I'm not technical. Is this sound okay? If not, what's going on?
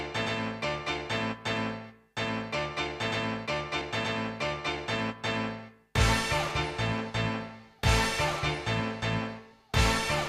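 No. At 3.81 s and again at 7.79 s the sound briefly skips, as if a tiny sliver was snipped out and the two sides pushed together with no gap. This is audio missing between chunks. The recording was likely made in blocks of about 4 seconds, and each time one block ended and the next began, roughly three hundredths of a second of sound was lost.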